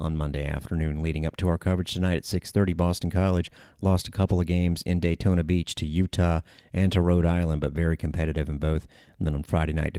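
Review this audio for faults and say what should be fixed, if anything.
Nothing in the recording needs fixing, as the signal shows no technical faults anywhere along its run.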